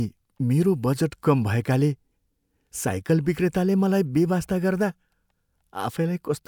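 No technical faults can be heard in this recording.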